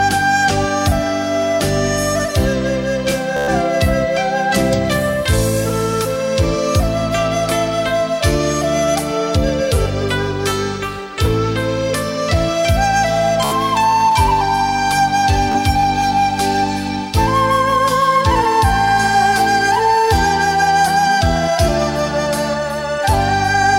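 Audio packets arrived late or were lost over the wireless link, so the receiver kept replaying its last short buffer. This Bluetooth stutter buzzes at 3.37–3.51 s, 13.45–13.55 s and 15.52–15.59 s, then the sound jumps ahead, skipping 112, 70 and 28 ms.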